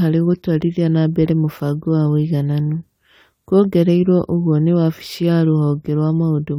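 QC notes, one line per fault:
No technical faults are audible in the speech signal at any point.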